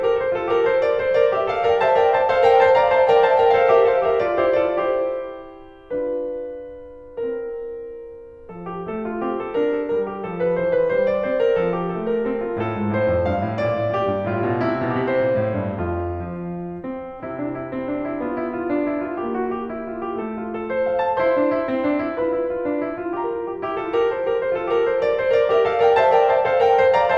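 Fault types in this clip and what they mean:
No technical faults can be heard in this music clip, as the signal stays continuous and stable throughout without any audible disruption.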